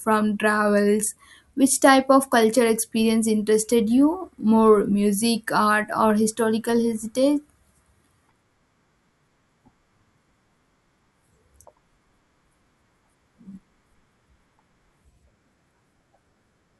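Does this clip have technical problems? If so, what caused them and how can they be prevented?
No, the speech signal holds steady throughout with no technical faults to trace or prevent.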